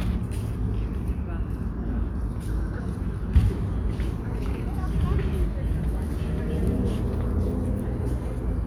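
No technical faults are audible.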